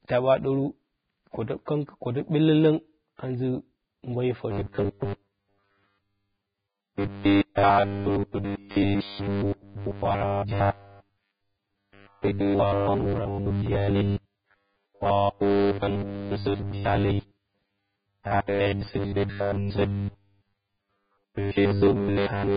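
From the start of the speech, the audio has no content above 4.9 kHz, and the band below is grainy and hissy, with roughened tones and smeared consonant onsets. This heavy codec damage is likely Vorbis compression at a very low rate, consistent with something around 15 kbps. The encoder pulled its cut-off down and quantised what remained so coarsely that fine spectral detail was replaced by noise of similar energy, leaving a dull, gritty sound.

From 4.51 s to the end, a robotic sound from repeated short buffers takes over. A rigid, metallic buzz at 100 Hz runs through the speech, which fits a repeated segment about 10 ms long. New audio is likely arriving too seldom, so the playback side loops the last short buffer to fill the gap while the real signal is skipped, with roughly 70% of the audio being repeats. The speech only loosely follows its original shape.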